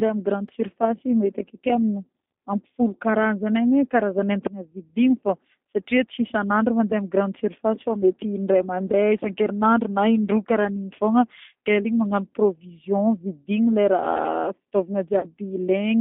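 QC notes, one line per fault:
throughout: G.729 codec. The line is confined to roughly 200 Hz to 3.6 kHz, so the speech sounds thin, with no low body and no sibilant air above the cutoff. The voice has a plainly audible rough, slightly synthetic texture. This happens because the coder keeps only a vocal-tract filter, a pitch predictor and a few excitation pulses per frame instead of the waveform itself, which fits an 8 kbit/s G.729A-type codec.
15.19 to 15.26 s: VoIP packet loss concealed by the speech codec. About 40 ms of audio is missing, which fits two lost packets. The decoder fills the hole by repeating its last pitch and filter settings at falling gain, so the sound smears into a buzzy tone or coloured noise that fades. Each frame is predicted from the previous one, so the voice stays weak or distorted for tens of milliseconds or more after the packets return at about 15.26 s.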